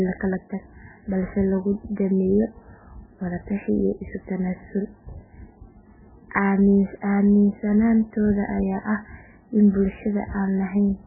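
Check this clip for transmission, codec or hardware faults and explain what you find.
Heavy codec damage runs through the whole clip, likely from MP3 compression at a very low bitrate, around 8 kbps. Nothing survives above 2.9 kHz, and starved weak frequency lines flicker between frames, giving watery, swirly speech with smeared attacks. A plain low-pass filter would dull without swirling.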